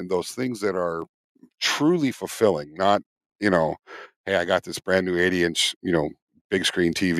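Speech, with a microphone volume stepped up at 1.02 s, between "those things that are" and "truly fulfilling not you". Voice and background rise together by about 4 dB in a single step, as the call software raised the device's input volume after judging the microphone too quiet.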